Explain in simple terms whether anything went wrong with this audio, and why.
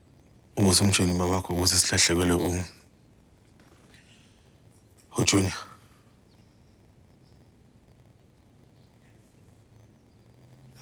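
A block size mismatch (padded) runs throughout: one stage passes on shorter blocks than the next reads, which fits a 512-sample read, and silence fills each gap. This causes an 86.1 Hz buzz and slows the sound to 0.938 speed, pitch roughly unchanged.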